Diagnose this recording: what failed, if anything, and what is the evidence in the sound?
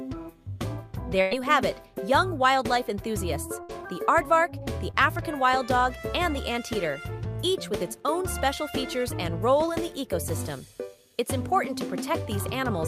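The network dropped packets in a burst of packet loss at 1.21–1.33 s, losing about 100 ms, and at 3.63–3.71 s, losing about 60 ms. Each time the receiver stretched the last sound and let it fade. Playback then jumped ahead, skipping the missing stretch.

A short concealed packet loss at 4.91–4.95 s cost about 20 ms, also in the network. The decoder covered the hole by extrapolating the preceding sound, then blended back into real audio. The result is a brief smear rather than an audible gap.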